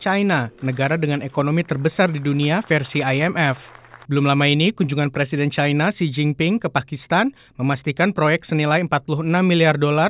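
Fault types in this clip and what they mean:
No faults can be heard.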